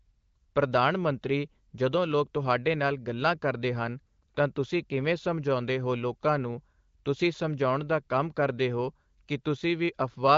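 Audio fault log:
No faults heard in this speech recording.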